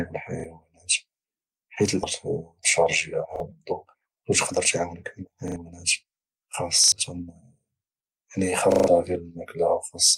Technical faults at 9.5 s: none

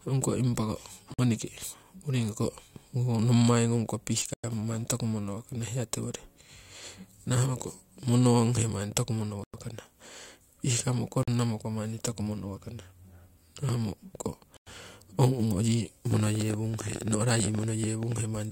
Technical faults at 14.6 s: gap between chunks

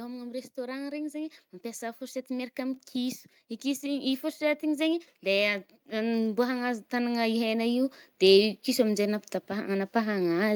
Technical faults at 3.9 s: automatic gain rising

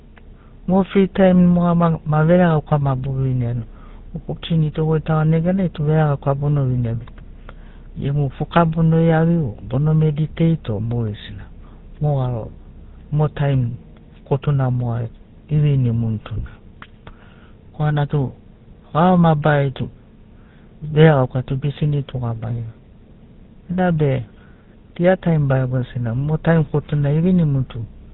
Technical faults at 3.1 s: GSM full-rate codec

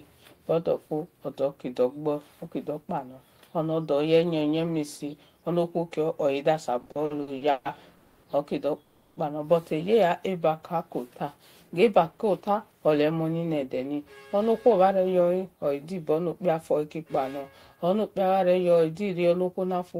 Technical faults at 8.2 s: call audio freeze

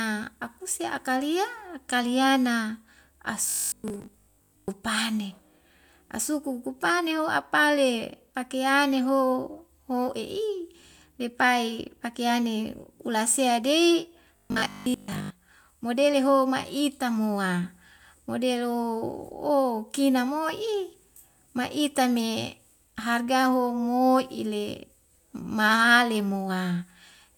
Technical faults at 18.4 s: none

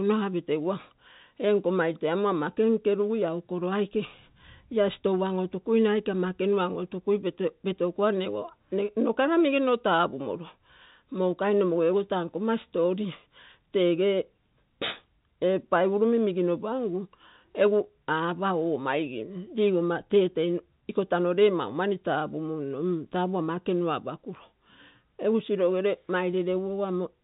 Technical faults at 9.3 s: none

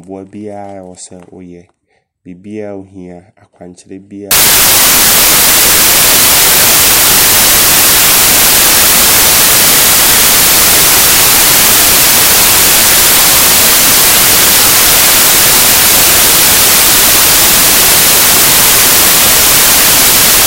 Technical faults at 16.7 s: samples built from the wrong bytes

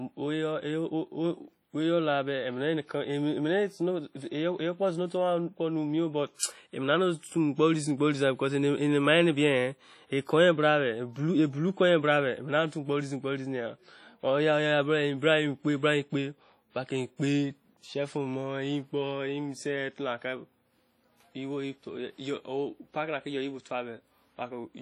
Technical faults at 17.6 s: WMA compression

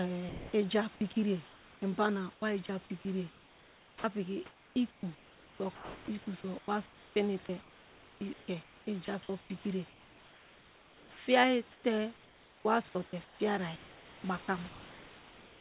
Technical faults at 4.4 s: sound chopped by the voice detector

